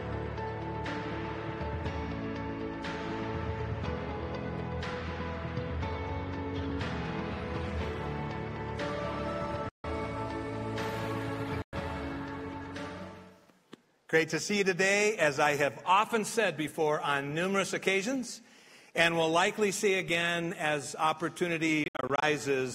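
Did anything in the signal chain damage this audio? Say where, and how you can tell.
Yes, in playback, from a likely Bluetooth dropout: flat silences at 9.69–9.84 s and 11.62–11.73 s, then scattered short gaps from 21.84 to 22.23 s (longest 64 ms), seen as empty full-height columns on a spectrogram. Late packets were discarded, and the sound resumes further on, as if it had kept playing.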